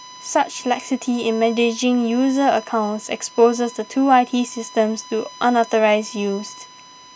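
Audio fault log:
Throughout: USB whine, as current drawn in the bus's 1 ms frames leaks into the audio through power or ground, laying a steady, fixed-pitch 1 kHz tone beneath the speech, roughly 25 dB below it.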